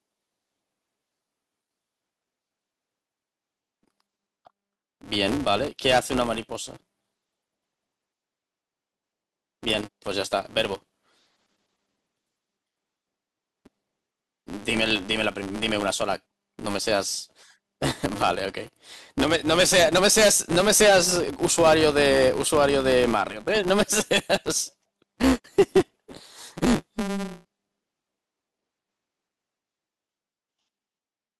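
From start to finish the speech carries a 200 Hz buzz, the signature of a filter restarted on every block. The filter discards its state at each boundary, so every block opens with a small transient. Ticks recurring every 5 ms fuse into a buzz that rises and falls with the speech level.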